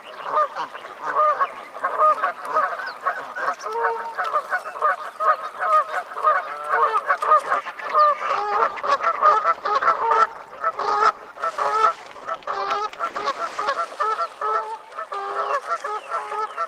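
At 8.34 s a call bitrate drop begins and lasts until about 13.87 s. The link's bandwidth estimate fell, so the encoder was forced to spend far fewer bits. The coding turns coarse and the top end is cut away. The sound goes rough and muffled, with a watery edge. It stays at its worst for about 5.5 s. The degradation fits a fall from roughly 40 kbps to about 14 kbps.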